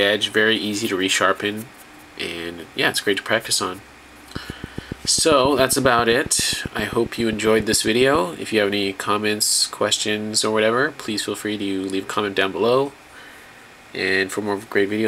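From 4.36 to 8.16 s, a train of clicks ticks at a steady 7.4 per second. That's about thirty pulses, roughly 10 dB above the sound, likely interference.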